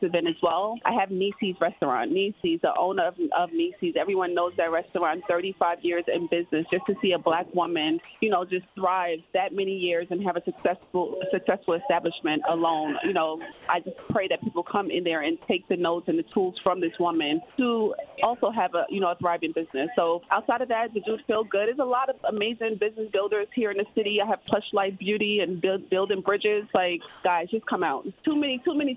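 At 2.42 s there's a tiny gap, about 20 ms, where the sound gives way to steady noise and then picks straight back up. It's most likely sound dropped by the voice detector. The sender read that sliver as background and stopped transmitting, so the receiver filled in comfort noise and roughly 10 ms of real sound went missing before the detector triggered again.

Two longer stretches get choppy, from 6.7 to 14.7 s and from 18.08 to 27.24 s. Both are likely sound chopped by the voice detector, which kept flipping between sending and not sending. In the first stretch about 800 ms in total was swapped for comfort noise, and in the second about 300 ms. You hear the sound break up with two or more holes in each stretch. Over the whole clip nothing comes through above 4 kHz, which fits an ordinary G.711 A-law call leg at 64 kbps.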